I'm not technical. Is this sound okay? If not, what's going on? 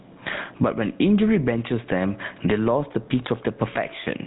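No, not really. Two things are going on, and both run through the whole clip.

First, gain pumping. The level keeps getting pulled down whenever the speech gets loud, so it breathes in and out by a big amount. The likely cause is a recording level set far too high, with an automatic limiter or compressor clamping down on every loud moment. Loud and quiet parts end up squashed close together.

Second, the GSM full-rate codec, the compression used by early mobile phones. It rebuilds the voice from a rough model of the throat driven by evenly spaced pulses, which gives the speech a clearly audible buzzy, gravelly roughness. It also cuts off everything above roughly 3.9 kHz, so the voice sounds narrow and phone-like, lacking the crisp top end.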